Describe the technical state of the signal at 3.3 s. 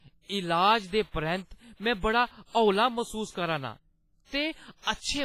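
At 3.3 s the speech carries heavy WMA compression damage, present across the whole clip. It sounds ringing and washy, with hiss that swells and fades with the voice. Nothing remains above 15.5 kHz. This likely comes from a WMA transform codec at a low bitrate, around 24 kbps.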